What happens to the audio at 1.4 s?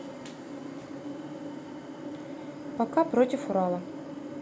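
Nothing goes wrong at 1.4 s: the speech plays through that moment intact, with no dropout, click, distortion or other audible fault.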